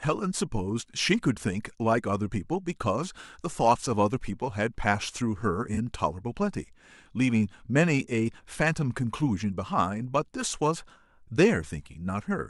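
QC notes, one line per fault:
3.21–3.29 s: corrupt frame concealed. A concealed stretch of about 76 ms. The decoder caught damaged data and covered the gap itself, muting or smearing it from the last good spectrum. The length points to roughly three lost frames.
5.74–5.78 s: corrupt frame concealed. A shorter concealed stretch of about 36 ms. This fits two concealed frames.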